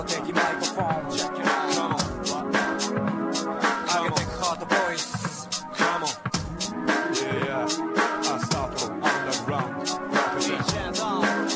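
Nothing stood out on listening; the sound comes across as a normal wideband call, with no content above about 8 kHz.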